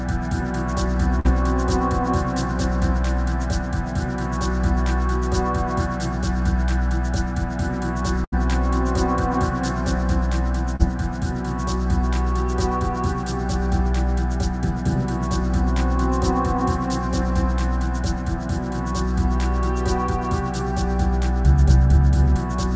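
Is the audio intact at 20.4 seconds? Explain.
Yes, the audio is intact at 20.4 seconds, with nothing there beyond the steady call-codec band limit that leaves no content above 8 kHz.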